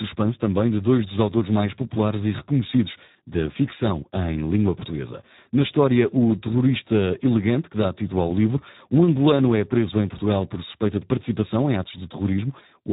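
Speech runs through the Speex codec for its whole length. It sounds hoarse, noisy and near robotic, which fits a starved 8 kbps setting. Nothing remains above 3.8 kHz.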